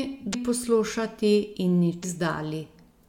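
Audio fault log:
0.30–0.35 s and 2.00–2.04 s: damaged data in a compressed stream. Each event is a brief, roughly 44 ms disruption that breaks into the speech. At these points the compressed data is corrupt, so the decoder cannot read the affected frames correctly and produces wrong output. It loses sync and has to search for the next valid frame header before clean decoding resumes. That short stretch of misdecoded material is heard as an abrupt glitch rather than as normal sound.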